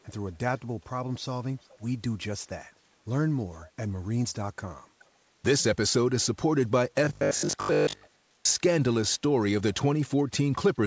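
It's a speech clip with a faint echo leak at 0.29–0.36, 1.6–1.82, 3.62–3.67 and 4.99–5.05 s: a quiet copy of the voice trailing about 0.42 s behind, likely from a loudspeaker echo canceller letting some through. Then from 7.05 to 8.49 s there's robotic sound from repeated short buffers, a rigid 50 Hz metallic buzz where most of the real audio gets skipped, likely from late-arriving audio being patched with repeats, which fits a 20 ms buffer.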